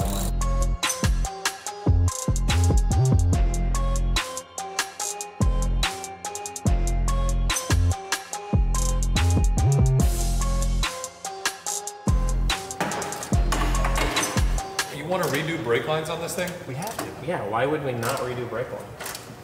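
No technical faults are audible.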